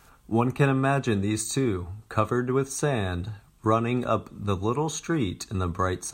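Listening through the speech recording, nothing stood out as a technical fault at any point.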